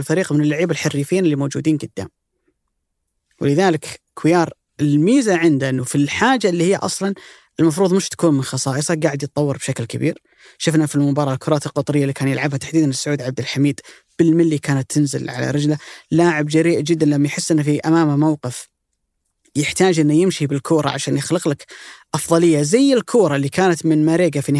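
No technical faults can be heard anywhere in the speech.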